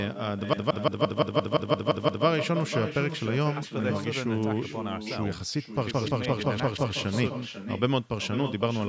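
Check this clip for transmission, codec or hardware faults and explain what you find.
The speech carries one fault for its whole length: echo with no canceller. Each phrase is trailed by a second copy about 9 dB quieter, arriving roughly half a second later. The far end played the call through a loudspeaker. Its microphone picked that sound up, and nothing cancelled it. So the speech returned after the network round trip and now shadows itself. The call microphone processing is also audible, with nothing above 8 kHz, and that band limit is normal.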